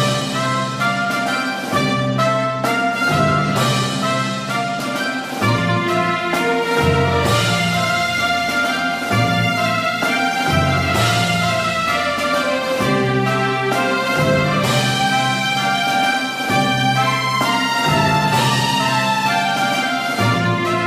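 No technical faults are audible.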